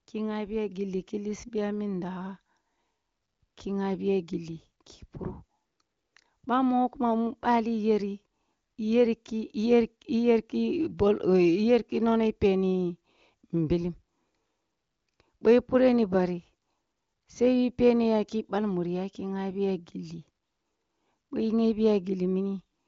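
No technical fault can be heard in this speech recording. It has gone through the AMR wideband (HD Voice) codec, with nothing above about 7.2 kHz and at most faint coding traces, which fits the codec's high rate of around 23 kbit/s.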